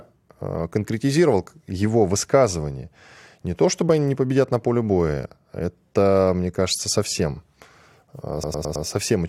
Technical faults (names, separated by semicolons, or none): repeated frames